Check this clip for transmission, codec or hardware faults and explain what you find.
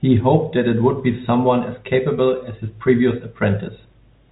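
Nothing here points to a transmission, codec or hardware fault; what you hear is ordinary G.711 telephone coding doing its normal job on the speech, with the band topping out below 4 kHz.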